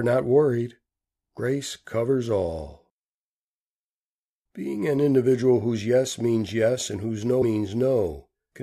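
Compressed frames skipped at 1.37 s, just before "covers all", and at 7.41 to 7.43 s, after "means yes and whose", in this speech clip. Whole frames never play, so the audio jumps about 50 ms, then about 70 ms, a few frames of roughly 23 ms each.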